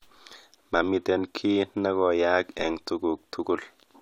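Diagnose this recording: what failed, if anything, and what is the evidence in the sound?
A DC step hits the speech at 2.59 s, in the converter or analogue input stage. The zero line of the waveform jumps at that instant and a single low thump is heard, while the speech carries on unchanged around it. The offset then drains away as a slow decay, which fits a high-pass near 2 Hz downstream pulling the shifted baseline back to zero. Unlike a dropout or digital click, no audio is lost.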